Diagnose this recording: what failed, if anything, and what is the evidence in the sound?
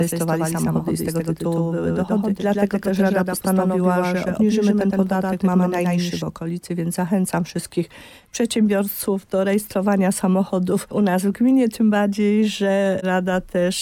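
A doubled audio track runs from the very start until it stops abruptly at 6.22 s: every event is followed, roughly a tenth of a second later, by a full-band copy a few dB quieter, with no decay or room colour. On a waveform each transient shows a dry twin trailing behind it. The spectrogram shows every onset smeared into a paired stripe, which vanishes at 6.22 s. The likely cause is a second capture through a slower driver or buffer path mixed back in alongside the direct one.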